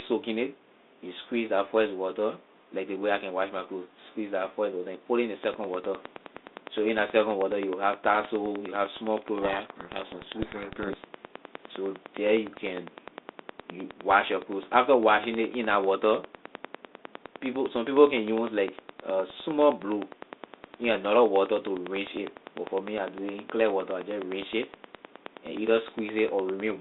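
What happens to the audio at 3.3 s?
Nothing goes wrong at 3.3 s; the speech carries on intact through that moment, with only the narrow telephone band of the G.726 ADPCM line at 32 kbit/s.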